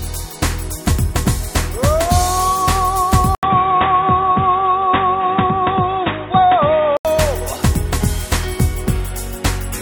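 At 3.35 s the sound drops out for 80 ms, then returns dull and boxy. From there to 7.05 s nothing is heard above 3.8 kHz. A faint new background noise sits well below the signal. The loudness stays about the same. At 7.05 s the full bandwidth comes back. This pattern points to an input switched to a poorer device, likely a change to another microphone or a headset's narrowband call profile partway through recording.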